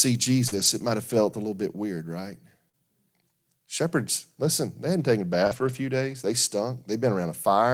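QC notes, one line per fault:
0.47–5.77 s, scattered short gaps: about three small dropouts, the longest only a few tens of milliseconds, totalling 120 ms of missing speech. The receiver bridged each one by extending the preceding sound, rebuilding 260 ms in all, so each hole is heard as a brief tick, smear or hiccup. On a spectrogram, look for short horizontal streaks where partials freeze. In the waveform, look for repeated cycles or slight discontinuities at each splice.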